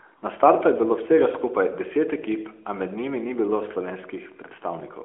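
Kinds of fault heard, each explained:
No faults found; the speech sits in a narrowband mobile-line band of 300 Hz to 3.4 kHz, with nothing above 3.5 kHz.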